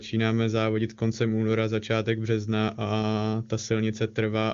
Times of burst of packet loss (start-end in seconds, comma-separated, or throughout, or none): none